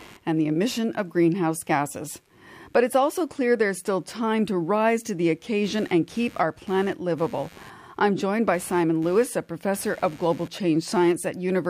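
Shifting load in the computer is disturbing the shared ground of the audio circuit for the whole clip, producing computer activity noise: a faint buzzing pulse around a hundred times a second, sitting roughly 30 dB below the speech and following the machine's activity rather than the talker.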